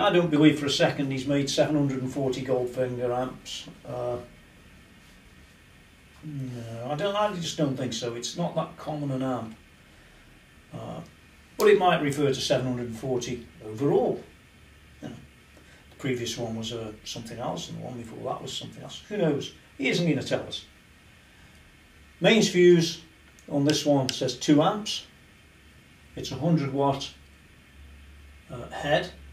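No technical faults can be heard anywhere in this audio. There is nothing to place on a timeline.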